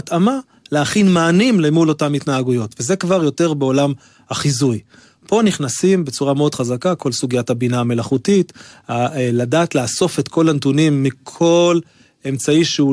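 No technical faults can be heard anywhere in the speech.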